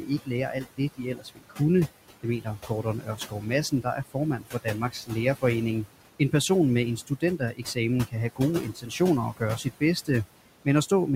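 Right from the start there are noise suppressor artifacts: the room noise, sitting only about 14 dB under the speech, gets pulled down by about 17 dB whenever it's judged to be steady background, so it dips in the gaps and swells back under the talking.

That same suppressor also cuts the speech itself. It mistakes bits of it for noise between 0.01 and 1.6 s and again from 2.23 to 5.44 s, with drops of up to about 18 dB. Around half a second of sound is swallowed in the first stretch and roughly a second in the second. It happens again after "med en", from 7.07 to 9.01 s, and briefly from 9.33 to 10.09 s, with drops of about 16 dB. There, the affected sounds just go faint.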